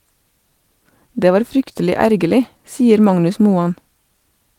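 The sender's clock runs about 2% slower than the receiver's, so clock drift between sender and receiver leaves the buffer short and the speech subtly unsteady throughout. From 0.50 s to 4.18 s, repeated timing corrections insert short repeated pieces, adding roughly 70 ms and slowing playback to 98%, heard, if at all, as slight hiccups and an unsteady tempo.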